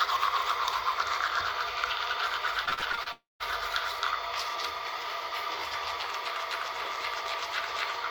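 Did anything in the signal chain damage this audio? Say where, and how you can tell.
Yes, the network stage. From 2.65 to 3.08 s, repeated packet loss gives a choppy, robotic texture: seven short holes, the longest about 36 ms, are patched by extending the previous sound, so roughly 39% of that stretch is concealment.

From 3.12 to 3.42 s the audio stops. The last sound continues briefly as a fading buzz and then sits silent for about 180 ms before returning with that section gone, the pattern of a likely long network dropout.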